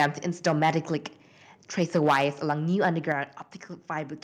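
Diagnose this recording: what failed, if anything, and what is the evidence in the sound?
The failure is at the converter, and the likely cause is microphone overload. The loudest peaks are flattened with a harsh, crackling edge at 0 to 0.06 s, 0.46 to 0.78 s, 1.81 to 2.52 s and 2.83 to 2.86 s. They exceed full scale by about 8, 5, 9 and 2 dB. Only a small share of samples, a few percent, are cut. The input gain is set too high. The converter hits its ceiling and slices off the waveform tops.

The call processing stage shows a microphone volume stepped down. The whole signal, voice and background together, drops suddenly at 2.11 s by about 3 dB, then at 3.12 s by about 5 dB. The first step falls inside the long distorted stretch. The second comes shortly after the burst at 2.83 s. The call software likely detected clipping and cut the device's input gain in discrete steps rather than smoothly.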